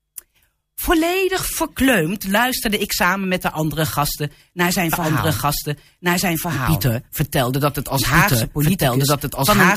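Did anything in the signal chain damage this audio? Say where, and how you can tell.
Yes. From 4.93 s, right after "andere gasten naar zijn", a doubled audio track appears and runs to the end: a second full-band copy of the speech enters abruptly, trailing by about a second and a half at roughly the same level, with no decay or added room colour. Because it is a dry, fixed-offset duplicate rather than a reflection, the stage is likely the capture or edit path, where a slower second route or two misaligned copies get summed into one track.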